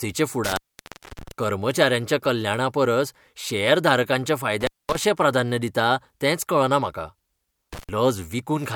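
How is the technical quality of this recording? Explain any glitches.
The recording has a recurring intermittent contact problem, with three dropouts. The first runs from 0.44 to 1.31 s, with the signal gone for about 0.62 s. The second runs from 4.61 to 4.96 s, open for about 0.22 s. The third is a short one from 7.73 to 7.89 s, open for about 0.1 s. A loose plug or cable is briefly breaking the connection, so the speech cuts out with crackle at each edge, leaving only faint hiss until the contact closes again.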